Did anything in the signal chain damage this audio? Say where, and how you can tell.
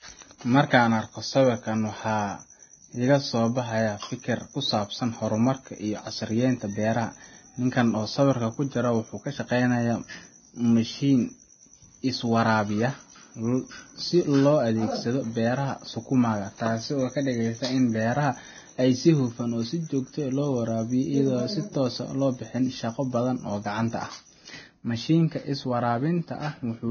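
Yes, and the damage runs through the whole speech clip, so it's a codec-stage problem rather than a one-off glitch. There's nothing at all above 6.5 kHz, and what's left of the upper band sounds hissy and grainy, with sibilants smeared and consonant onsets blurred. That points to heavy lossy encoding, likely Vorbis compression at a very low bitrate, somewhere under 20 kbps. At that rate the encoder trims the top end and quantises the remaining treble so coarsely that real detail turns into noise-like grit.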